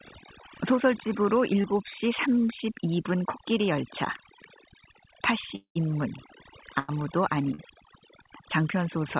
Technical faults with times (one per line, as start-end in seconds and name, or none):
0.00-9.19 overdone noise removal
1.62-1.66 short concealed packet loss
5.56-5.77 long network dropout
6.79-6.90 burst of packet loss
7.54-7.60 short concealed packet loss